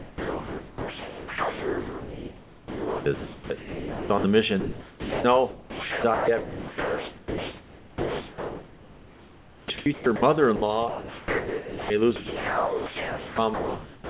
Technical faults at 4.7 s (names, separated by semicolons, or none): sound dropped by the voice detector